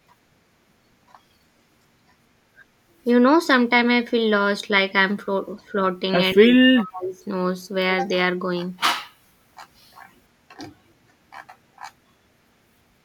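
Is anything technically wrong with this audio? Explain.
Yes. Speech suppressed in double talk cuts the speech from 6.34 to 7.15 s, dropping it by roughly 40 dB. A brief dip follows at 9.14 to 9.18 s. The likely cause is an echo canceller turning down its own talker along with the loudspeaker echo.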